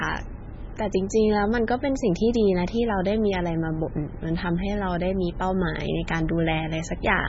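From start to finish the speech has a hard ceiling, with nothing above 7.6 kHz, and heavy swirling, watery smearing that is most likely MP3 compression at a very low bitrate, perhaps around 16 kbps. Starved of bits, the encoder discards treble and switches weak frequency lines on and off between frames, so s sounds chirp metallically and attacks blur. A plain low-pass filter would dull the top without this warbling, frame-to-frame flicker.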